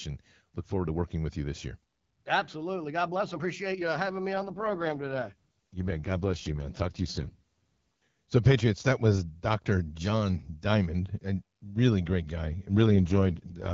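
A speech recording over wideband HD Voice whose sound turns rough, raspy and synthetic twice with no gap and no loss of bandwidth: from 4.34 to 7.35 s, just after "you having me", and from 12.81 s to the end, after "really great guy". This is an AMR rate drop. The network pushes the AMR-WB codec to a lower rate and spends the freed bits on error protection, which fits a drop from 12.65 to 6.6 kbit/s.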